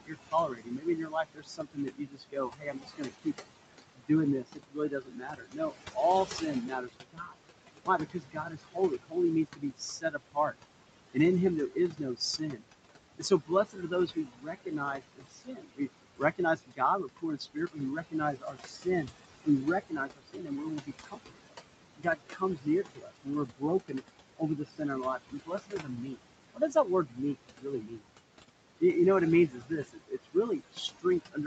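Across the whole clip the room noise, which sits about 10 dB below the speech, drains away between phrases and swells back under them. These are noise suppressor artifacts: frame by frame, bands judged to be steady noise are pulled down by about 21 dB.

Speech cut by the noise suppressor is heard in six stretches: 0 to 3.35 s, 3.95 to 10.56 s, 11.11 to 12.62 s, 13.17 to 21.4 s, 21.96 to 28.04 s, and 29.48 s to the end. In each, soft consonants, word endings and quieter syllables sound swallowed or faint, dipping by about 20 to 22 dB. The suppressor mistook these parts of the speech for noise and turned them down with the background. Within those spans the affected parts add up to roughly 2 s, 3 s, half a second, 4 s and 3 s respectively.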